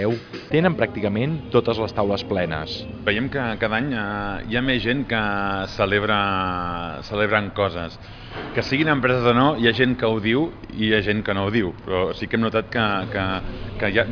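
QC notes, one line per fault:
No faults were found in this clip on listening.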